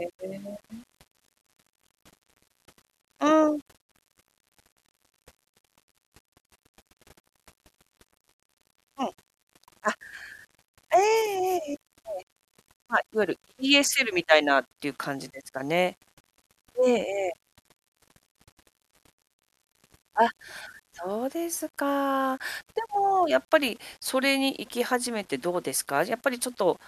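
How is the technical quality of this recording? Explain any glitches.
The quality is compromised by grainy, signal-following distortion throughout the speech. Low bit depth without dither is the likely cause, consistent with rounding to about 9 bits: error tracks the voice, roughly 35 dB down, gritty in quiet passages. Waveforms show visible stair-stepping; spectrograms show broadband hash appearing only alongside speech.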